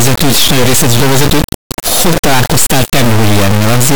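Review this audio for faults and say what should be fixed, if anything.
Integer read as float runs throughout the speech. The 32-bit integer samples are decoded as 32-bit float bit patterns, giving near-zero or huge values. The output snaps between silence and the clipping limit as a loud buzzing square wave. Unlike ordinary clipping, no recognisable waveform survives, and quiet passages drop to dead silence.

Declaring the sample format in the file header or stream settings, and checking it at read time, prevents this.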